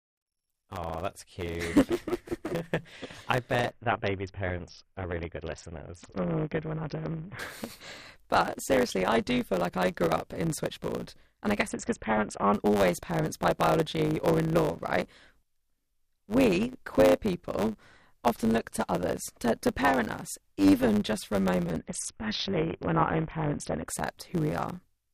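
One stage in the chain of this speech recording writes longer blocks than the next stage reads, a block size mismatch (truncated), so the tail of every block is discarded. That fits 512-sample writes being cut short. The result is a steady buzz at 100 Hz, the block rate, running through the whole clip, and the speech plays about 1.07 times too fast while staying near its normal pitch. Separately, a Bluetooth SBC bit pool drop occurs three times, at 3.71 to 7.39 s, 11.67 to 12.54 s (ending just before "always parents by biology") and 21.79 to 23.88 s (starting just after "even just for a"). Each time the link appears to have congested and the encoder cut its bit allocation, which fits a fall from a bit pool of 31 to 6, or roughly 55 kbps. With so few bits, the upper sub-bands are starved and the rest are coarsely quantised. The treble goes dull and a gritty noise rises until the rate recovers.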